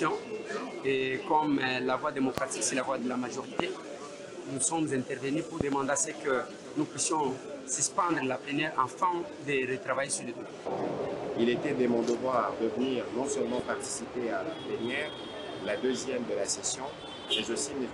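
The audio has five loud pops. They fall at 2.38 to 2.40 s, 3.60 to 3.62 s, 5.61 to 5.75 s and 13.59 to 13.61 s. The third is a double pop. Each pop stands well clear of the sound, around 20 dB above it, though the last is softer at roughly 10 dB. The sound continues underneath. A likely cause is a brief voltage spike from a plug, switch, static or driver glitch.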